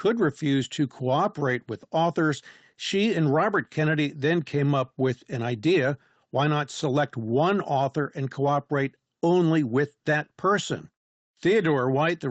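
No technical faults can be heard in this speech recording.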